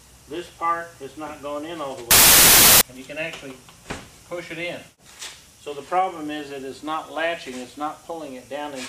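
From 2.11 to 2.81 s, packed 24-bit samples are read back as 16-bit ones, a wrong sample width. Many values are built from mismatched bytes, so the sound becomes loud noise with the original buried inside, slowed to two-thirds speed and lowered in pitch.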